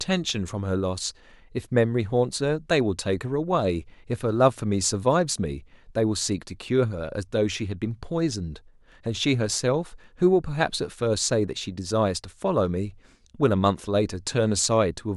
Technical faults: none

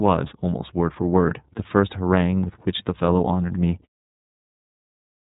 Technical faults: iLBC codec

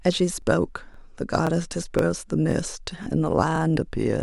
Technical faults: overlapping chunks

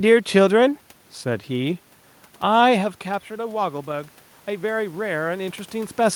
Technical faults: automatic gain rising

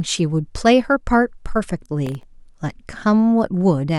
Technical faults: processor overload crackle

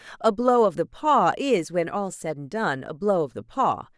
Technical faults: none

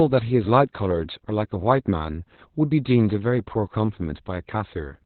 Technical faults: Opus voice compression

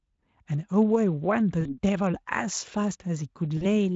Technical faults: VoIP packet loss concealed by the speech codec

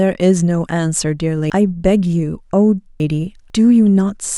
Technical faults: chunks out of order

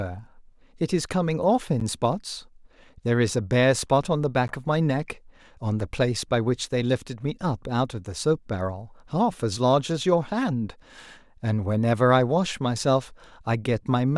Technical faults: block of digital silence

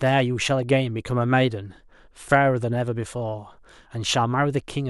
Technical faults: none

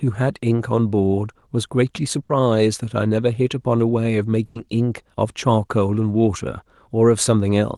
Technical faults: burst of packet loss

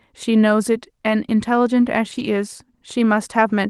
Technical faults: lost packet rebuilt from error correction

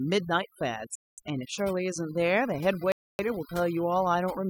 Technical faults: overdone noise removal; Bluetooth stall

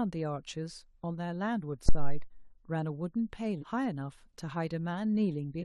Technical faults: phantom power thump; damaged data in a compressed stream

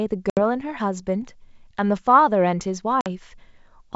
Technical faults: packet loss on an ADPCM call

